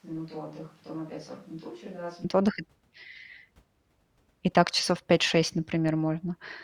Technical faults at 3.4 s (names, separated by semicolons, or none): none